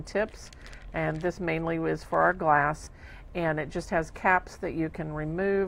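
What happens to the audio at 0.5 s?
Nothing goes wrong at 0.5 s; the audio plays through that moment intact, with no dropout, click, distortion or other fault.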